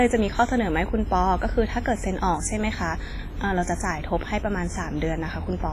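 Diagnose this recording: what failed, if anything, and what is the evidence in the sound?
The codec stage failed. Throughout the speech, a ringing, washy smear and hiss that breathes with the signal point to heavy WMA compression as the likely cause, at a low bitrate near 24 kbps. A spectrogram shows nothing above 15.4 kHz and blotchy, gappy upper bands.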